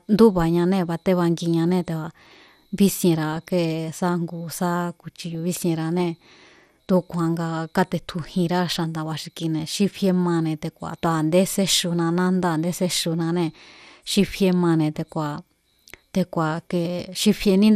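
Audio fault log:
throughout MP2 compression: The speech sounds dull and gurgly, with a granular edge as upper sub-bands drop out and what's left gets coarsely quantised. It's plainly audible and most likely down to low-rate MP2, which fits an 80 kbps stream.
3.32 to 3.49 s, and 5.35 s DAB burbling: Short bursts of noise blips sit over the speech. A few bit errors sneaked past error correction, so wrong samples put short blips of noise in single sub-bands. The longer first burst is the messier of the two.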